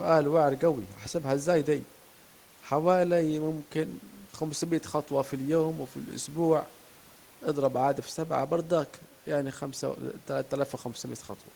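Nothing stood out on listening to this speech recording.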